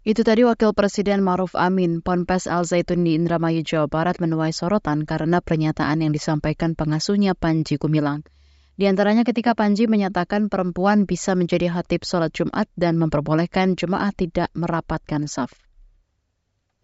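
No technical faults are audible.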